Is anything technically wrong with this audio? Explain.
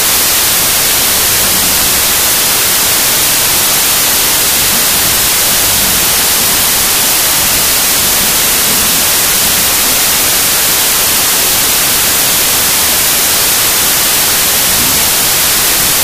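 Yes. Throughout the clip there is a wrong sample width fault. The sound fits 32-bit samples being read as 16-bit: each real sample splits into two mismatched values, so loud noise buries the original, which plays at half speed, an octave low.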